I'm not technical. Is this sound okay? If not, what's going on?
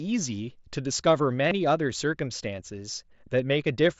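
No, there's one small glitch. At about 1.5 seconds you get concealed Bluetooth headset packet loss. For roughly 15 ms, a bit of audio between the headset and phone went missing, probably a packet or two. The receiver filled the gap by repeating a matching slice of the sound just before it. The headset's mSBC codec, its normal wideband connection, comes through with its usual slightly limited brightness.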